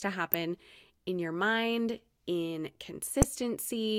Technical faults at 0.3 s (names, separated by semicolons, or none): corrupt frame decoded